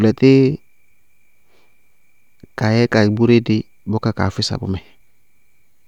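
No technical faults are audible anywhere in the speech recording.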